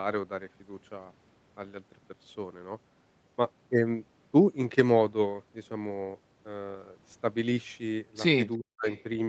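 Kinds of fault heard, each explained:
Speech suppressed in double talk: from 8.58 to 8.87 s the talker dips by roughly 40 dB, likely the echo canceller ducking everything while both sides overlap.
Echo leak: at 8.9 to 9.03 s a faint copy, around 30 dB down and 360 ms late, slips back through, likely from uncancelled loudspeaker pickup.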